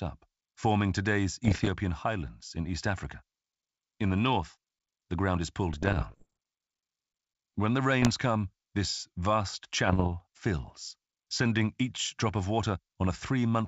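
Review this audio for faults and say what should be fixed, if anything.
Pops and gritty, rough bursts with brief jumps in level break into the speech at 1.45 to 1.69 s (between "forming today's" and "highlands in"), 5.73 to 6.27 s (after "north the ground is"), 8.02 to 8.09 s (just before "come this vast") and 9.87 to 10.08 s. These are bit errors on an ADPCM link, with the first burst the densest. Each flipped bit throws off the decoder's step size and predictor, so the damage rings on for several milliseconds instead of staying a single click. Adding error protection or a cleaner, more reliable transmission channel would prevent it.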